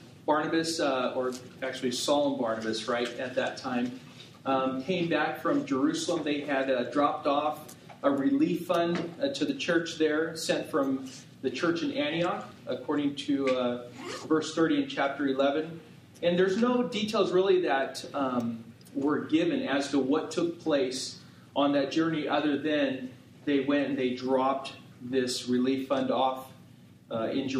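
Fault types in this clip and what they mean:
No technical fault can be heard in this audio. There is nothing here that calls for a line of its own.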